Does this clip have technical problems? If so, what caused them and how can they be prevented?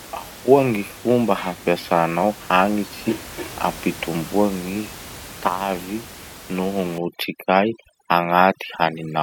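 Yes. From 6.98 s to the end at 9.22 s, overdone noise removal mutes bands near the noise estimate, leaving twinkling, warbling specks in the background; room noise sits about 18 dB down. Prevent it by lowering the reduction strength.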